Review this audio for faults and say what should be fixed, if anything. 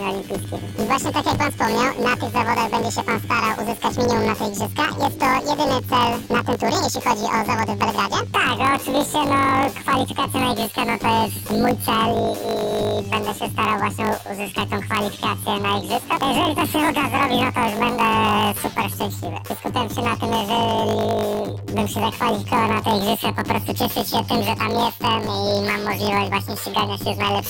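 Planar audio is read as interleaved throughout. Each 20 ms block plays twice at double speed, producing a robotic 50 Hz buzz. Fix it by matching the reader's channel layout to the decoder's planar output.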